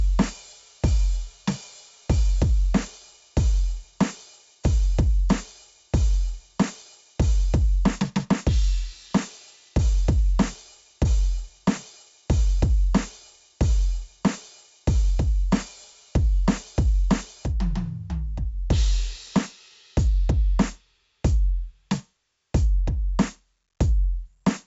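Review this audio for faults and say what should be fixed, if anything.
4-bit ADPCM compression runs through the whole music clip. Each sample is coded as a coarse step from a prediction, so a gritty hiss rides on every loud passage and attacks smear. Nothing is heard above 7.7 kHz, which points to a low sample rate and fits a 64 kbps stream. On a spectrogram, a level-tracking noise floor fills the band, with a hard ceiling at 7.7 kHz. Re-export from the original source as 16-bit PCM or a modern codec at a full sample rate.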